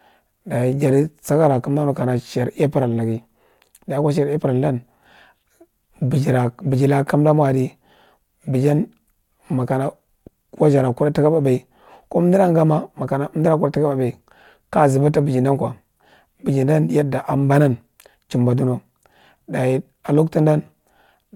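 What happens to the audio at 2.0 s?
Nothing goes wrong at 2.0 s: the speech there is intact, with no dropout, click, distortion or other fault.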